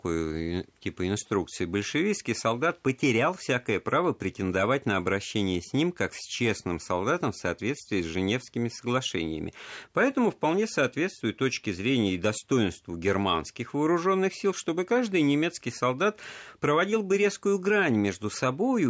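No technical faults can be heard anywhere in the speech. The call's microphone processing can be heard working as intended, trimming away the lowest bass and leaving nothing above 8 kHz.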